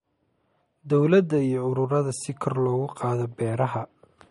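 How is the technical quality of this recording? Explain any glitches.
The recording is clearly degraded by lossy compression throughout, with damage that is plainly audible. The likely cause is MP3 compression at a low bitrate, roughly what a 47 kbps encode would produce. Short of bits, the encoder drops all treble above 11.2 kHz and switches weak frequency lines on and off between frames, leaving the speech dull and watery, with swirling, metallic chirps on s sounds and softened consonant attacks.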